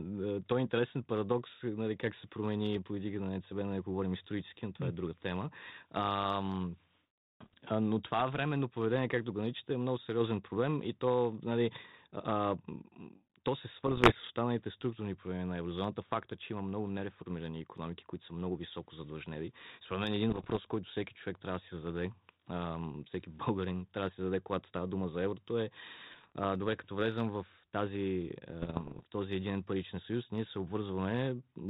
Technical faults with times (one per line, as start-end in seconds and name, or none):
7.44-7.54 bit errors on an ADPCM link
13.79-14.30 bit errors on an ADPCM link
20.30-20.58 bit errors on an ADPCM link
26.11-26.32 bit errors on an ADPCM link
28.62-29.04 bit errors on an ADPCM link